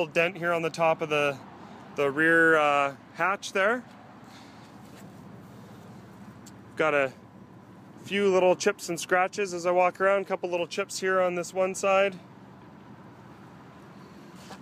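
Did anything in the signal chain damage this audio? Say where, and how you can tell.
No, nothing in the signal chain audibly damaged this.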